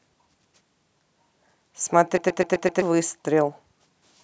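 The system stalled while the sound hardware kept replaying its ring buffer, a system hang loop in this speech clip. From 2.18 to 2.82 s, one 128 ms piece of speech repeats exactly five times, a stutter at about 7.8 Hz that fits a 2048-sample buffer. The buffer is long, so the fault comes across as a machine-gun stutter, and roughly 0.7 s of the original speech never gets through.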